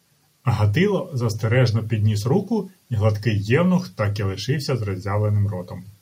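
There are no technical faults to describe in this speech.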